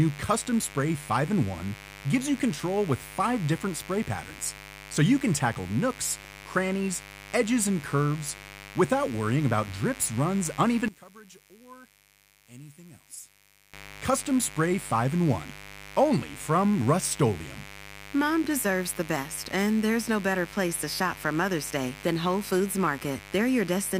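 A mains buzz runs under the whole recording. Sharp switching spikes from the 50 Hz supply, from something like a dimmer, a rectifier or a broken shield, have leaked into the signal path twice per cycle, and their harmonics climb well into the kilohertz range. The result is a continuous, raspy buzz sitting somewhere around 20 dB below the speech, present from the first second to the last.

From 6.20 to 6.33 s there is DAB burbling. Reception on the digital radio link weakened enough that a small share of bit errors, well under one percent, slipped past error correction into the MP2 audio stream. Corrupted samples put short blips of noise into individual sub-bands, a pattern that fits roughly six damaged frames in a row. For that short stretch the speech is disturbed by this burbling.

Between 10.88 and 13.74 s the speech suddenly drops by about 20 dB, as though only a faint copy of it remains. 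The likely cause is one channel inverted: one side of the stereo pair had its polarity reversed, so when the two channels were summed to mono, the centred speech cancelled almost completely. All that survives is the small difference between the channels.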